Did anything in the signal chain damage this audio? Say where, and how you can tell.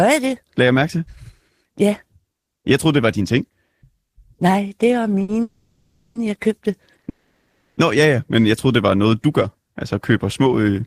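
Yes. Network and jitter buffer: a short stall from a late packet at 5.22 to 5.30 s holds a sound about 60 ms too long, then resumes without loss.

A call audio freeze at 5.42 to 6.17 s and 7.09 to 7.79 s stretches the sound into a fading buzz for 730 ms and 680 ms, likely from packets held up and an emptied jitter buffer.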